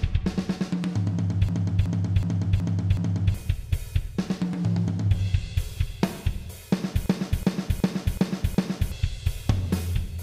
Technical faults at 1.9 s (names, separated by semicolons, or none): system hang loop